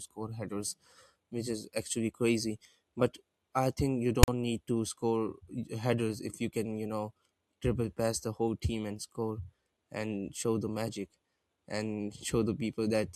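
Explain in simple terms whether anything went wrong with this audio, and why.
Between "I think you" and "need to score", around 4.23 to 4.28 s, there's a harsh rasp and then a tiny dropout. That's file tags played as audio: stored text and blank padding read out as sound.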